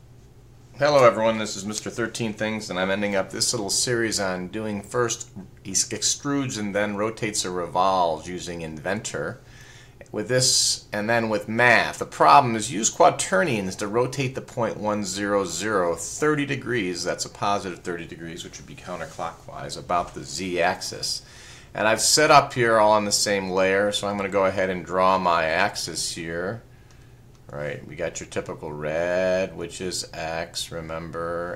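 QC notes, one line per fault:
No technical faults are audible anywhere in the audio, and the signal holds steady across its whole duration.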